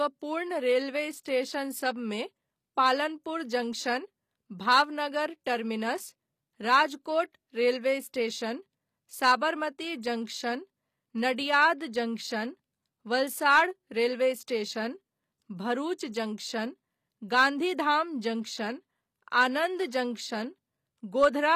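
Speech runs through the whole clip with plainly audible HE-AAC compression damage: s sounds come out gritty and metallic, with a bright but synthetic-sounding top end, which fits a low bitrate of around 24 kbps. The likely cause is spectral band replication, where the treble is rebuilt by copying lower bands upward rather than coding the real harmonics. On a spectrogram, the upper region shows repeated, smeared blocks that don't continue the lower harmonics, and nothing appears above 15 kHz.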